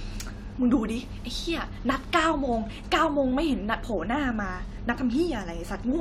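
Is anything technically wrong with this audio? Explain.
No, nothing technically wrong can be heard in this speech clip. There is no fault at any point in it.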